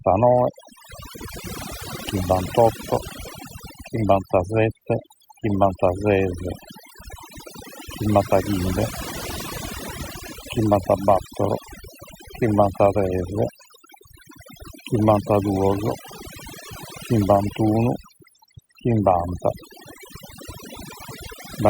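From start to finish, overdone noise removal strips bands near the noise floor, leaving twinkling specks in near-silent gaps, unlike a gate's whole-signal cutoffs.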